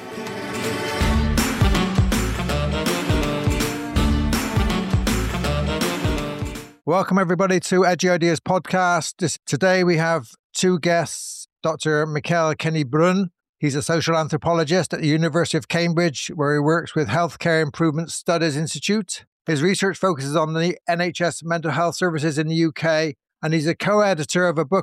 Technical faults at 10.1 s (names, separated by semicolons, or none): none